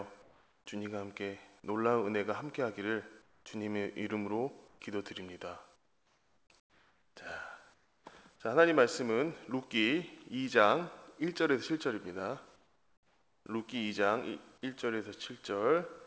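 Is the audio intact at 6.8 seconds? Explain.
No. Comfort noise in place of the background runs from 6.60 to 7.16 s. The real background is replaced by steady, featureless noise about 7 dB quieter. The likely cause is that transmission paused and the receiver synthesised filler noise.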